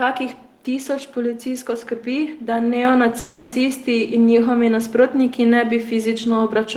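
At 2.85 s the microphone volume steps up. Speech and background noise jump together by about 5 dB in one step. The input level on the device was raised at once, so the sound gets louder abruptly rather than gradually.

From 3.19 to 3.70 s there is a call audio freeze. The last sound is stretched into a fading buzz for about 330 ms. The likely cause is delayed packets emptying the jitter buffer. The audio then resumes where it stopped, with nothing missing, only a gap inserted.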